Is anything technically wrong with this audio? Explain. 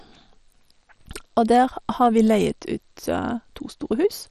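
Yes. Throughout the speech the sound is dull, with nothing above about 13.7 kHz, and it carries a heavy gurgling, granular roughness. The likely cause is MP2 compression at a low bitrate, which fits roughly 56 kbps. Layer II divides the spectrum into 32 equal bands and shares out bits, so upper bands drop out and the remaining ones are coarsely quantised. A plain low-pass filter would dull the sound without this grainy, flickering distortion.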